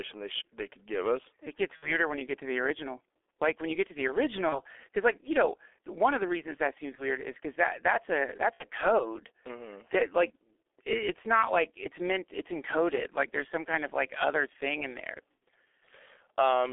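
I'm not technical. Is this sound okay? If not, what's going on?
No. G.723.1 codec, throughout: this old internet-phone compression keeps only a narrow telephone band and a rough voice model, so speech sounds muffled, hoarse and smeared.

VoIP packet loss concealed by the speech codec, at 1.76–2.00, 4.49–4.60 (after "you get to the"), 6.95–7.04 (after "the reasons that seems"), 8.54–8.65 (after "because that that's a") and 15.35–15.39 s. Pieces of the call went missing, and the phone guessed by stretching the last sound into a brief buzzy tone or fading noise before the voice recovered.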